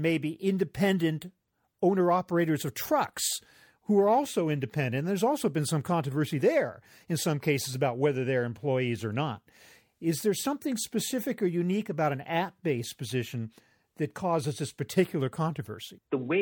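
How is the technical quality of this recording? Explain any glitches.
The speech recording is technically sound, with no glitches, dropouts or other faults anywhere in the signal.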